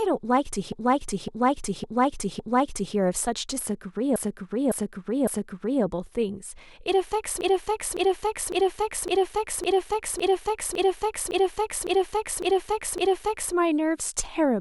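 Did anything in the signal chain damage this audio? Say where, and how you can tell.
Yes. The damage happened at the codec or storage stage, as repeated frames. A 0.56 s block of speech plays over and over in three places. From 0.72 to 2.95 s it repeats four extra times. From 4.16 to 5.83 s it repeats three extra times. From 7.41 to 13.54 s it repeats eleven extra times. The block length fits a run of about six compressed frames written or sent again. The decoder simply replays them. This stretches the audio by about 10 s in total.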